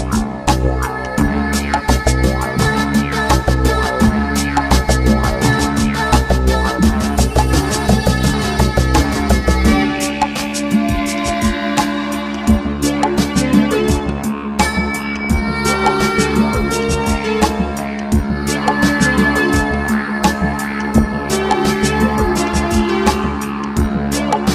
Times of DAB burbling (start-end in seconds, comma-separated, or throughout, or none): 5.23-5.27, 7.84-7.94, 15.11-15.25, 20.70-20.98